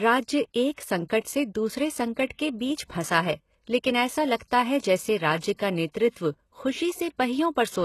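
HE-AAC compression runs throughout the speech: treble stops at 12.3 kHz and sibilants sound gritty and metallic, likely from replicated high bands at a bitrate around 16 kbps.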